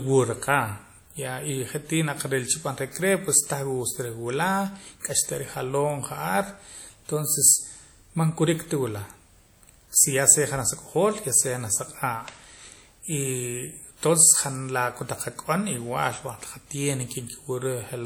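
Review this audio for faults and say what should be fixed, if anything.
Throughout the speech there is plainly audible ringing and a washy smear, with hiss that swells and fades with the voice. This is likely WMA compression: the transform codec, at a rate that fits 48 kbps, spreads quantisation noise across tens of milliseconds, although content extends to 20.1 kHz. To prevent it, keep an uncompressed master and encode at a higher bitrate.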